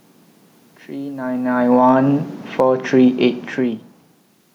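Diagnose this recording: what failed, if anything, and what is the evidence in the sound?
The automatic gain control in the call-processing stage is falling. From 1.16 s to 3.9 s the level sinks steadily by about 7 dB after the AGC judged the input too loud, or its background noise too strong, and eased its gain down. The room noise drops by the same amount alongside the speech, which separates this from the talker moving, as happens around 1 s and again near 3.5 s, where only the voice changes and the background stays put.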